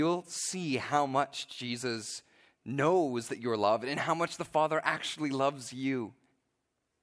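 Nothing stood out on listening to this speech recording.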